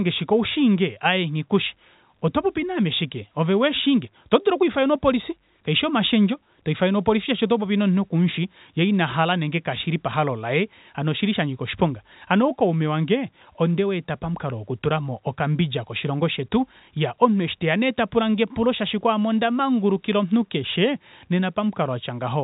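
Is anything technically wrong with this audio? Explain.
No, nothing is technically wrong with this audio.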